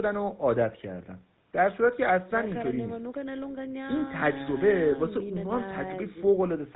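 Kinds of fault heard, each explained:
GSM full-rate codec: Throughout the speech there is a plainly audible buzzy, gravelly roughness, typical of the first GSM codec, whose vocal-tract model is driven by regularly spaced pulses with sparse excitation. Nothing survives above 4 kHz, consistent with a 13 kbps full-rate stream.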